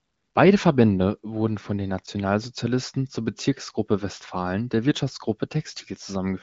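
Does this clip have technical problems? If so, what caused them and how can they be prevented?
No, nothing here needs fixing: the speech sits in a band that stops near 7.7 kHz, which fits AMR wideband (HD Voice) coding at 23.05 kbit/s, and no coding damage is audible beyond at most a faint trace.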